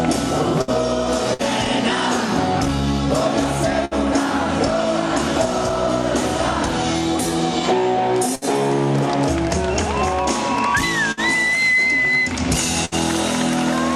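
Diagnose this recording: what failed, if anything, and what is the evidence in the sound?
Network stage, burst of packet loss at 0.61, 1.34, 3.85, 8.35, 11.12 and 12.85 s. Each time 60 ms goes missing, covered by a fading continuation of the preceding sound rather than a silent dropout.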